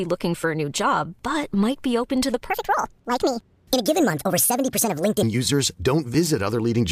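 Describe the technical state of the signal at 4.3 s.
A section at the wrong speed runs from 2.5 to 5.23 s, just after "be open to the". Playback at 1.54 times speed, likely from a clock mismatch, raises the speech by roughly seven semitones and hurries it.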